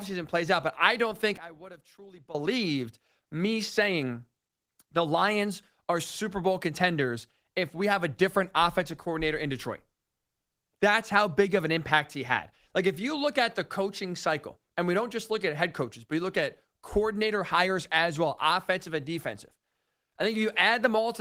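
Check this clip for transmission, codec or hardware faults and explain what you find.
One fault stands out, a short collapse in level between 1.37 and 2.35 s, with the Opus voice compression beneath it audible only as light coding texture. For just under a second the speech drops by about 18 dB and turns faint. The likely cause is one channel inverted: with one side's polarity flipped, the centred speech cancels when the channels are summed, leaving only their small difference. On a waveform the envelope shrinks abruptly for that stretch, and a spectrogram shows the energy nearly gone across the band.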